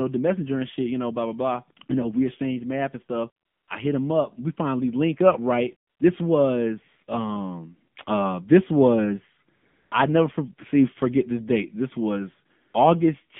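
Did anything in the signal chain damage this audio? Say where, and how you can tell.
Yes. The damage is in the mobile codec stage. Throughout the speech, AMR narrowband mobile codec processing is plainly audible. Nothing above 3.5 kHz survives, the low end is thinned below about 150 Hz, and the voice has the buzzy, synthetic edge of a low-rate vocal-tract model. At 7.4 kbps, only a few excitation pulses are left to rebuild each short subframe, so fine detail and natural breathiness are replaced by a coarse, pulse-driven approximation.

The same codec's discontinuous transmission causes the second fault, AMR comfort noise. In four pauses the real background drops out and a smooth, steady synthetic hiss switches in. The first runs from 3.46 to 3.68 s, between "exchange math and stuff" and "I hit him up". The second runs from 5.90 to 6.00 s, after "finally link up right". The third runs from 9.56 to 9.92 s, between "um uh this was" and "I never for see". 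The last is a brief 40 ms patch at 12.70 s. The sender stopped transmitting speech frames there, and the receiver generated filler noise from a rough level-and-spectrum description.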